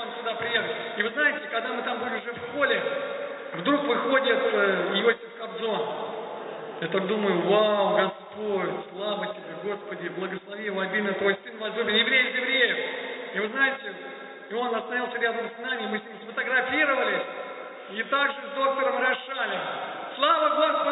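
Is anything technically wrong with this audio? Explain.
No, nothing is technically wrong: the audio came through a call path working as expected, and its content stops at about 4 kHz, which fits narrowband G.711 mu-law telephone coding.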